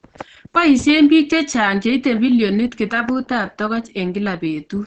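Throughout the speech, nothing is heard above about 8.7 kHz. The voice sounds muffled and hoarse, with plainly audible codec damage. This is likely Opus compression in its SILK speech mode, which fits a low bitrate near 16 kbps and wideband coding.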